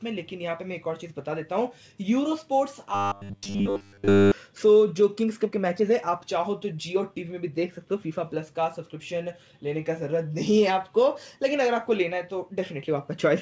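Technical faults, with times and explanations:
2.95–4.32 s: robotic sound from repeated short buffers. Nearly the whole stretch turns into a rigid, metallic buzz at 100 Hz. That buzz likely comes from a 10 ms piece being looped while fresh audio arrived too seldom. Unlike a pitch shift, the tone stays fixed and follows the sound's natural pitch only roughly.
3.76–3.78 s: skip ahead. Inside the buzzing stretch, playback jumps forward with no gap and no fill. Roughly a second of audio is simply gone, and the two sides are butted together. This cuts the delay sharply, unlike a dropout, which leaves silence or a repeat in place of the lost audio.
5.50–9.62 s: jitter buffer speed-up. The audio runs about 7% fast at unchanged pitch, and it sounds hurried. Roughly 300 ms in total is trimmed as many tiny pitch-period cuts spread across the stretch. This differs from the skip, which drops one large chunk at once, and from a resampling error, which would also raise the pitch.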